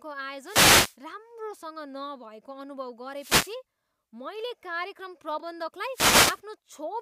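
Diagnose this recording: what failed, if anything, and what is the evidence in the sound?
The failure is a wireless microphone noise hit, three times: 0.43 to 0.97 s, 3.14 to 3.56 s and 5.92 to 6.40 s, each roughly half a second of swishing static over the speech. The fault sits in the analogue radio link ahead of any converter. As the FM carrier fades, with reflected paths cancelling the direct signal, the receiver's noise floor rises until the signal recovers.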